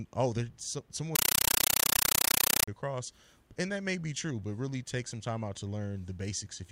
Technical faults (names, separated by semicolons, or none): compressed stream played as audio